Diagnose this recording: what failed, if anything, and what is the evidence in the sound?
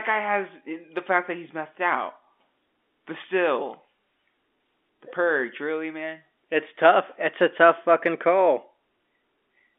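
Nothing in the speech stood out as a failure on listening.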